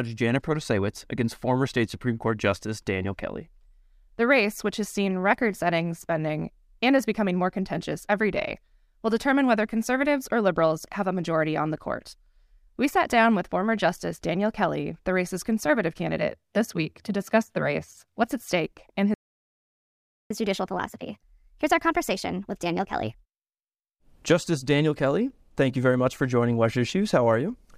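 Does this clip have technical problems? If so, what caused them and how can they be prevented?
Yes. At 19.14 s, just after "what's at stake and", the speech cuts out in a playback stall lasting about 1.16 s, until 20.31 s. The likely cause is that the player ran out of buffered data or its thread was blocked, so nothing reached the output. On a waveform this shows as a flat line; on a spectrogram, a blank vertical band. A larger playback buffer and a higher-priority audio thread would prevent it.

From 20.31 s to 23.31 s the player is in catch-up at higher speed. It resamples its backlog to run 1.15 times faster, so the speech sounds hurried and raised by about two semitones. On a spectrogram the harmonics and formants shift upward and the syllables are compressed in time; the waveform shows tighter spacing between syllables. Catching up with time-stretching that preserves pitch, or by skipping ahead, would avoid the pitch shift.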